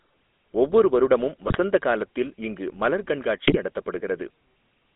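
From start to finish the speech passes through a GSM full-rate codec, and the damage is plainly audible. The codec rebuilds the voice from a vocal-tract model driven by a sparse, regularly spaced pulse excitation, giving the familiar buzzy, gravelly roughness at a rate that fits 13 kbps GSM. The band runs only from about 250 Hz to 3.6 kHz. On a spectrogram that shows as a hard ceiling near 3.6 kHz, a bare strip below 250 Hz, and smeared, grainy harmonics.

GSM bit errors strike twice, from 1.47 to 1.58 s and from 3.43 to 3.58 s. Corrupted filter, pitch and gain values reach the decoder, so each frame is rebuilt with the wrong spectral shape or level, and the voice breaks into short squawks and gargling. The waveform shows sudden amplitude jumps in 20 ms blocks, while the spectrogram shows abrupt vertical smears of misplaced energy lasting about 0.1 to 0.15 s.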